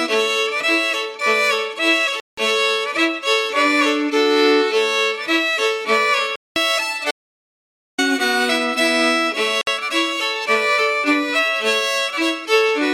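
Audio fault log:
2.20–2.38 s, 6.36–6.56 s and 9.61–9.67 s: Bluetooth dropout. The sound stops for about 0.17 s, 0.2 s and 0.06 s, then picks up further along, as though it had kept playing through the hole. Each gap is most likely wireless audio packets arriving too late to the headphones and being discarded, so nothing plays until good data returns. The longer two gaps fit a run of a dozen or so lost packets.
7.11–7.98 s: audio dropout to silence. For about 0.87 s the signal falls to silence, with no room tone underneath, and resumes mid-flow. The likely cause is the input being lost through a broken link, disconnection or mute while recording carried on writing silence. Whatever sounded during that stretch is gone rather than delayed.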